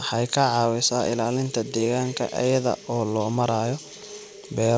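A speech recording with nothing technically wrong with it; it has come through a call path whose content stops at 8 kHz, which fits a G.722 codec at 64 kbps.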